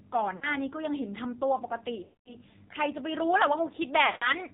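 The speech runs through an AMR narrowband mobile codec for its whole length. Everything above 4 kHz is gone. The bandwidth is phone-like and thin. Heavy codec damage makes the voice buzzy and synthetic. That fits a low bitrate of around 5.9 kbps. At that rate, only a few pulses per subframe drive the vocal tract model. Fine detail cannot survive.

Lost AMR speech frames occur three times. From 0.36 to 0.55 s, about 60 ms of speech drops out. From 2.04 to 2.37 s, the gap is longer, about 220 ms. From 4.06 to 4.34 s, about 160 ms is lost. Each time, frames failed their check. The decoder repeated the last good pitch and vocal tract settings at falling gain. The sound smears and stretches, then fades toward silence. The voice returns weak or rough for a moment.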